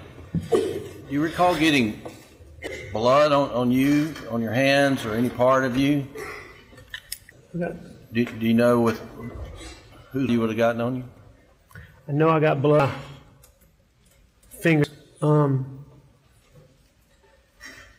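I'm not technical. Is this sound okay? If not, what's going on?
No. Brief chirps or blips at 2.67, 7.32, 10.29, 12.80 and 14.84 seconds come from damaged data in a compressed stream. Corrupted bytes make the player misread a moment of audio. That produces a garbled sound or a short gap.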